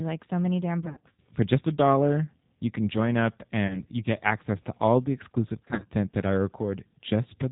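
The G.729 codec runs throughout. Its rough, synthetic band-limited speech, nothing above 4 kHz, fits 8 kbit/s. At 0.82 to 1.2 s, after "like so many damn", VoIP packet loss concealed by the speech codec stretches speech into fading buzz or noise. It recurs at 3.67 to 3.81 s, after "you can join up", and 5.65 to 5.86 s, before "that I".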